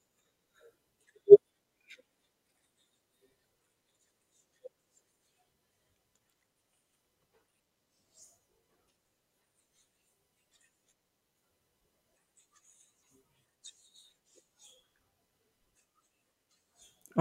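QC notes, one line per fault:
2.11, 8.07, 13.03, 15.61 and 16.51 s: dropped buffer (overrun). Each is a jump ahead in the speech, roughly 10 to 30 ms missing and no gap. Likely cause: samples not read before the hardware overwrote them, so the surrounding audio joins abruptly.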